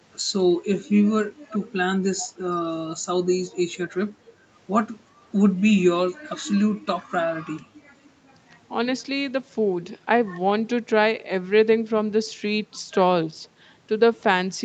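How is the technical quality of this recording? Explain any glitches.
Two short echo glitches appear, in a recording carried over a call link that passes nothing above 8 kHz. Echo leak, 1.49–1.66 s and 2.19–2.31 s: a far-end echo canceller likely missed its loudspeaker pickup, so a faint copy returns 367 ms late, around 20 dB down.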